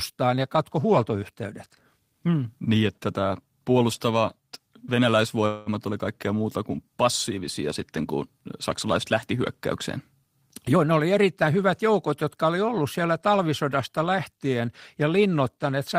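Speech in which two timing faults stand out. At 5.47 to 5.69 s there is a call audio freeze. For about 190 ms the last sound is stretched into a fading buzz or hiss rather than falling silent, and then speech resumes just before "oli kaikkea muuta kuin" without any syllable lost. The likely cause is packets held up in transit so the jitter buffer ran dry. Unlike a packet-loss dropout, nothing is cut out. The pause is inserted and everything afterwards arrives about 190 ms later. From 10.68 to 12.58 s, leading into "ollut siellä talvisodasta lähtien", a jitter buffer speed-up makes the speech run at about 109% of normal pace and sound hurried. The receiver is trimming a backlog by repeatedly dropping tiny pitch-period slices, removing roughly a fifth of a second in total. What separates this from a simple playback-rate change is that the pitch stays where it was and only the tempo rises.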